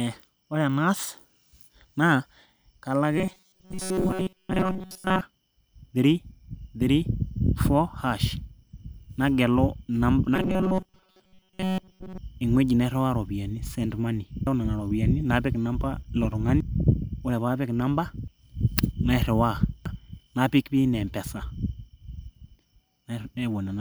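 Speech, with robotic sound from repeated short buffers at 3.18–5.21 s and 10.36–12.18 s: a rigid 188 Hz metallic buzz, likely from a roughly 5 ms block replayed through most of each stretch. Damaged data in a compressed stream causes single brief glitches at 14.47, 16.60, 18.28 and 19.86 s, isolated blips rather than a sustained, pitched buzz.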